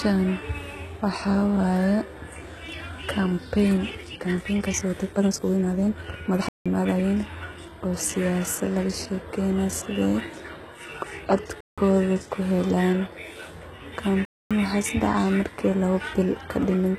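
Speech recording with HE-AAC compression throughout: the treble stops at about 12.3 kHz, and the highs above the coded band are rebuilt by copying lower bands upward, so their harmonics don't line up with the real ones. The damage is plainly audible, and the sound likely points to a low bitrate near 16 kbps. A time-stretched section runs from 3.92 to 7.14 s, where the speech suddenly rushes at about 1.82 times its pace while the pitch stays put, likely because software squeezed the passage by dropping short pieces to fit a shorter length. Blocks of digital silence cut the audio out and back abruptly at 6.49 to 6.66 s and 11.61 to 11.78 s, each about 170 ms long, which fits an 8192-sample buffer going unfilled, and again at 14.25 to 14.51 s for 256 ms.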